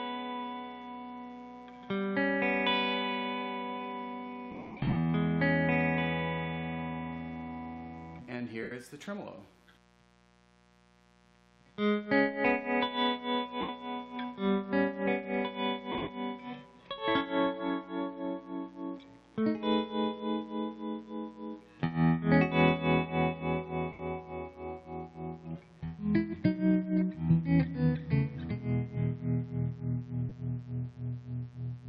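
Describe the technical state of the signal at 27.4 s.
At 27.4 s, as across the whole clip, a mains buzz sits about 30 dB below the signal: switching spikes twice per 60 Hz cycle spray harmonics up to several kilohertz, giving a raspy, bright edge rather than the smooth low tone of plain hum.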